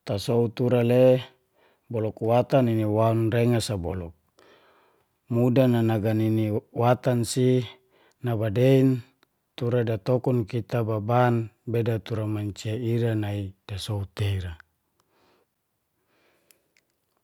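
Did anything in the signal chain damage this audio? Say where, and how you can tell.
No, nothing in the chain audibly damaged this speech.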